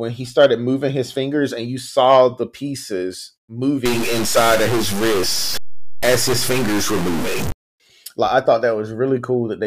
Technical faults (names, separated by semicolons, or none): stuck bit